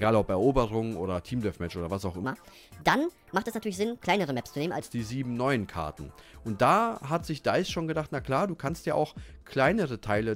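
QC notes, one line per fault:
2.24–4.80 s, section at the wrong speed: for about two and a half seconds the audio runs 1.33 times too fast, so pitch jumps up about five semitones and it all sounds hurried before snapping back, likely a stretch played against the wrong clock.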